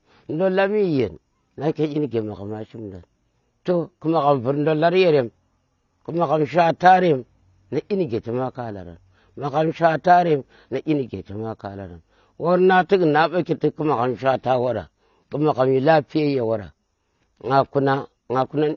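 AAC compression artefacts are plainly audible from start to finish in this speech. Nothing reaches above 7 kHz, so sibilants lose their edge and the whole sound turns dull. Sustained sounds carry a warbling, fizzy texture, and transients smear. The cause is likely an AAC-LC encode at a bitrate that starved its frequency lines, which fits a rate around 24 kbps. The encoder discarded the top band and coarsely quantised what remained.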